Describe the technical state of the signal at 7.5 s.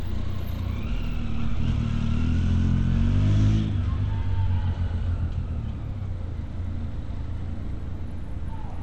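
At 7.5 s the audio carries plainly audible damage that matches Bluetooth SBC compression, and it runs through the whole clip. The likely cause is an SBC link at a bitrate that fits about 96 kbps. The codec splits the sound into a few wide bands and shares out too few bits. Upper bands starve, so treble flickers and drops away. Coarse quantisation adds a gritty noise. Nothing remains above 19.9 kHz.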